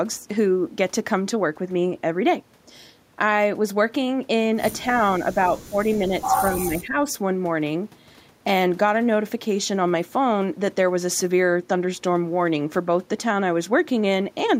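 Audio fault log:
4.83 to 5.77 s and 5.94 to 7.07 s, speech suppressed in double talk: the speech dips by around 10 dB in patches, about half a second in the first stretch and about a second in the second. Most likely the echo canceller heard both ends talking at once and turned everything down.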